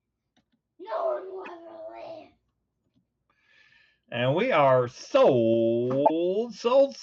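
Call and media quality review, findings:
Short garbled burst at 1.43–1.48 s, sound skipping ahead, then a mangled blip for about 58 ms. Same again at 6.05–6.11 s. Likely a broken MP3 bit reservoir in the decode path: frames got dropped, and the next frames went looking back for their borrowed data and found someone else's bytes. About two 26.1 ms frames' worth of junk each time. I'd check for frame loss upstream of the decoder.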